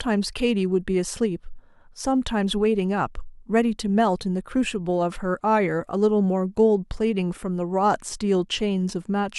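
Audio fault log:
Nothing stood out on listening to this speech recording.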